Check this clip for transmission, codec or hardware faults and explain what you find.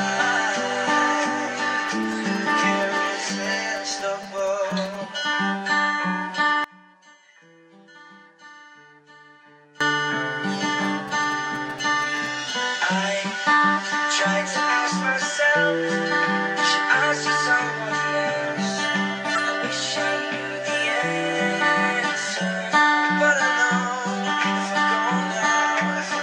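Three kinds of fault are present.

GSM signalling bursts occur from 1.88 to 4.96 s and from 10.85 to 12.51 s. A nearby 2G phone sends short groups of radio bursts, and the audio circuit rectifies them. Each stretch is a galloping dit-dit-dit of 217 Hz buzzes, about 20 dB below the sound.

From 6.64 to 9.81 s the audio drops by about 25 dB. Nearly everything vanishes, background included. The likely cause is one channel inverted. Its polarity is reversed, so the shared content cancels in the mono sum. Only the mismatch between channels remains.

A corrupt frame decoded appears at 19.35 to 19.38 s. It affects roughly one frame. Flipped bits led the decoder to play wrong gains or misread codes. This put energy at the wrong frequencies for the frame's length. The result is a brief artefact peaking around -10 dBFS.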